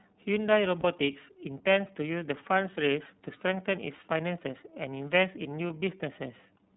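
The speech runs through the iLBC codec for its whole length, and the damage is plainly audible. Nothing above 4 kHz survives, so the band is narrow and sibilants lose their edge. Each frame's excitation is coded on its own, which gives the voice a rough, slightly synthetic grain. The frame rhythm and quality point to the 30 ms mode at 13.33 kbps.

Lost iLBC frames occur twice, from 0.81 to 0.85 s and from 5.67 to 5.71 s. Each gap is about 30 ms, consistent with a single missing frame. The decoder fills it by repeating the last pitch cycle blended with noise, heard as a brief held, faintly buzzy vowel. Because iLBC frames decode independently, the voice snaps back to normal immediately afterward.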